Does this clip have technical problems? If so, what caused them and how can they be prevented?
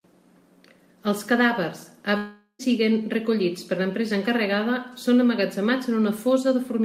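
Yes. A long network dropout, likely lost packets, occurs from 2.17 to 2.62 s: fading concealment buzz, brief silence, then the speech resumes at "recollits per l'empresa encarregada" with about 0.42 s missing. A larger jitter buffer and forward error correction would prevent this.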